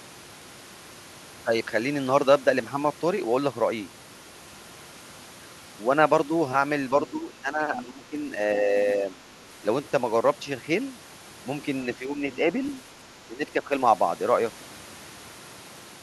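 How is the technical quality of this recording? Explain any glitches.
The recording has echo-control problems: the talker is turned down three times while the far end speaks, and a brief trace of the far-end voice slips through once.

Speech suppressed in double talk occurs at 7.08–8.31 s, 11.98–12.49 s and 13.28–13.72 s. Both ends were likely speaking at once, and the echo canceller, unable to tell the local voice from loudspeaker echo, pulled the whole signal down. The first dip is deepest, roughly 15 dB over about a second. The second is mild, around 5 dB, and the third is around 10 dB. Each makes the talker's voice dip.

The other side's voice leaks through at 12.33–12.38 s, inside the second dip. The far-end voice was likely played on the talker's loudspeaker and not fully cancelled, leaving a faint residue about 25 dB below the speech. It is a short scrap rather than a sustained voice.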